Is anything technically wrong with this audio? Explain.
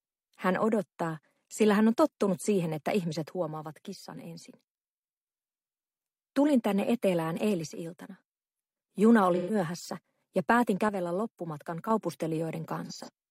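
Yes. There are two kinds of fault.

From 3.29 to 5.27 s, 7.66 to 8.35 s and 10.89 to 11.91 s, the level drops abruptly by about 6 dB and then returns. The likely cause is one channel dropping out. When one side of a stereo pair goes silent and the pair is heard summed to mono, whatever both sides shared loses half its level. Anything only on the missing side vanishes until it comes back.

At 9.35 to 9.55 s and 12.86 to 13.09 s there is AAC frame loss with concealment. In the first patch about 128 ms is missing, which fits three lost frames. The decoder fills the gap by reusing the last good spectrum, so the sound turns smeared and noisy there. In the second patch the same amount of loss is spread over about 256 ms, with the longest gap around 40 ms. That gives brief phasey flickers rather than one blurred stretch.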